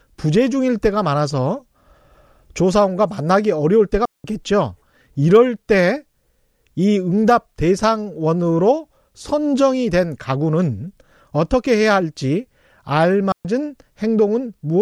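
Speech clip with two digital wireless dropouts, at 4.05 to 4.24 s (about 190 ms) and 13.32 to 13.45 s (about 130 ms). Each time the receiver lost too much data and muted with a quick fade, leaving a clean hole of near silence with no noise burst either side.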